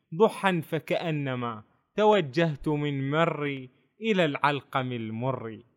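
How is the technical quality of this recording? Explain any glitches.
The speech carries a recurring glitch. Clock drift buffer slips occur from 0.68 s to 5.01 s, about four of them, spaced every 1.44 s. The likely cause is two devices running on separate clocks that disagree by something on the order of 150 ppm, so the buffer between them slowly drifts until it drops or repeats a handful of samples to catch up. Each slip is heard as a short, regular click in the speech.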